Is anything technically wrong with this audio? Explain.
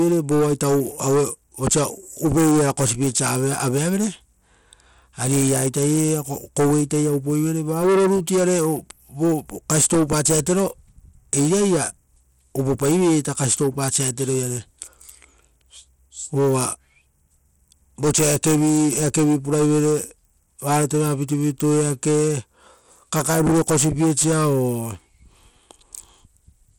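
Yes. Throughout the speech, the treble flickers and drops out, and a gritty, grainy noise with aliasing rides on the voice. This points to Bluetooth SBC compression as the likely cause, at a low bit pool consistent with roughly 96 kbps. SBC splits the signal into a few wide sub-bands and shares out bits without a hearing model, so the weaker high bands are starved and the rest are coarsely quantised. The damage is plainly audible, and no content is present above 21.1 kHz.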